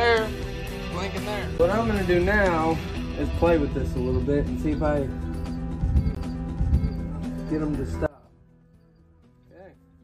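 A CD skip at 1.58 s, and again at 6.15 s: each time the laser jumps to a different turn of the disc's spiral. Playback mutes for a very brief moment with a tick, then resumes from a new point, so the sound lurches forward or back.

One channel inverted, from 8.06 s to the end: the level drops by about 25 dB and the centre largely disappears, leaving a faint residue. This is likely one stereo channel with reversed polarity, so the shared content cancels when the channels sum to mono.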